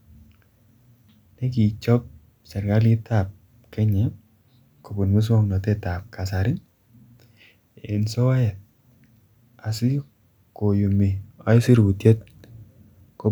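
No audible technical faults turn up in this recording.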